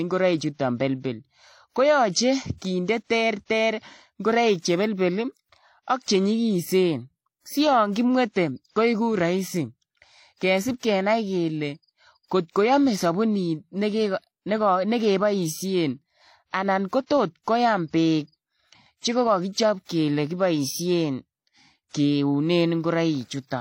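Throughout the speech, nothing is heard above 16.2 kHz, and two layers of coding artefacts sit together. This is likely transcoding between lossy codecs: the pattern fits WMA at around 64 kbit/s followed by HE-AAC at around 32 kbit/s, with the second encoder spending bits on the first one's damage.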